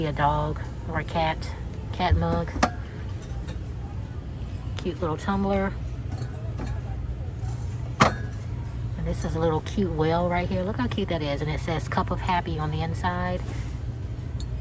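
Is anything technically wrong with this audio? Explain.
No, nothing in this audio stood out as a technical problem on listening.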